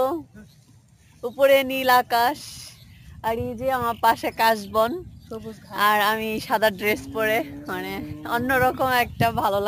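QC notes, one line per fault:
Throughout, imaging from sample-and-hold upsampling: unsmoothed held samples suggest 16 kHz raised to 44.1 kHz, mirroring the spectrum into 8 to 16 kHz, about 19 dB down, as metallic fizz.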